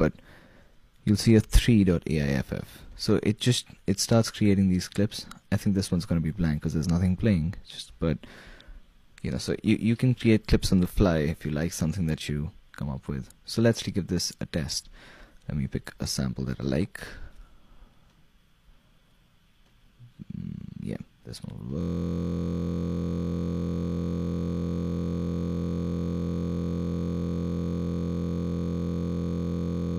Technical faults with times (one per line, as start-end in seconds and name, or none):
13.75-13.81 damaged data in a compressed stream
21.81-29.98 system hang loop